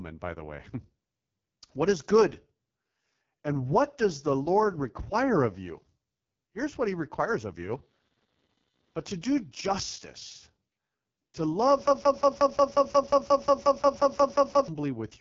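AMR wideband (HD Voice) codec damage runs through the whole speech clip. The sound is rough and raspy, with nothing above 7.5 kHz, which fits AMR-WB's lowest 6.6 kbit/s mode.

Computer activity noise appears from 7.70 to 10.30 s: a faint buzz of around 500 pulses per second, far below the speech. Processor or peripheral load shifting the audio circuit's ground causes it.

A broken-record loop runs from 11.87 to 14.68 s. A 0.18 s fragment repeats back to back, and the speech that should have played is lost. The likely cause is a stalled player or stream resending its last buffered piece.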